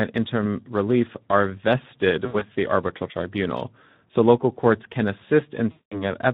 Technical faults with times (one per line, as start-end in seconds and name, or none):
0.00-6.33 Speex codec
2.25-2.45 VoIP packet loss concealed by the speech codec
5.71-6.04 VoIP packet loss concealed by the speech codec